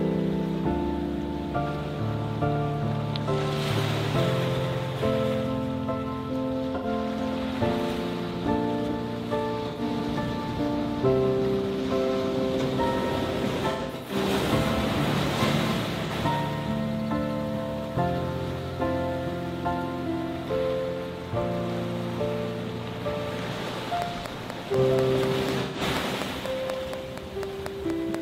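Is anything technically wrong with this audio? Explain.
Yes, two things. There's AAC frame loss with concealment at 6.75, 9.69, 13.71 to 14.16, 16.05 and 25.61 s. The decoder patches missing frames from the last good spectrum, so each gap, roughly 43 to 128 ms (the 13.7 s stretch is scattered), turns smeared and noisy. Then from 24.02 to 28.16 s there's a regular train of clicks, about 4.1 per second, around twenty in all and about 15 dB above the sound. The ticking is steady and evenly paced, likely pickup from nearby equipment or a faulty connection.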